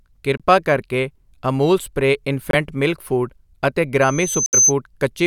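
At 0.37 to 0.42 s and again at 2.51 to 2.55 s the speech briefly cuts to silence, each gap losing about 23 ms of audio. When it returns, a little has been skipped rather than delayed. A matching hole, losing about 70 ms of audio, falls at 4.46 to 4.55 s. These are likely Bluetooth dropouts: audio packets failed to arrive at the headphones in time and were discarded, so playback fell silent until valid data resumed.

From 4.01 s a thin, piercing tone at 6.2 kHz rises out of the speech, swelling over roughly half a second into a squeal that ends by 4.73 s, peaking around 5 dB above the speech itself. The longer dropout cuts through it. This is loudspeaker feedback squeal: a microphone picked up the loudspeaker it was feeding, and at 6.2 kHz the loop gain exceeded one, so that frequency kept reinforcing itself until it stopped.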